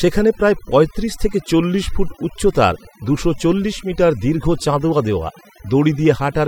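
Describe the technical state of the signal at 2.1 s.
At 2.1 s the speech is under overdone noise removal, present throughout the clip. Noise reduction set too strongly is pulling individual frequency bands down or off when they sit near its noise estimate. Quiet speech detail goes too. The background drops and breaks up into twinkling specks.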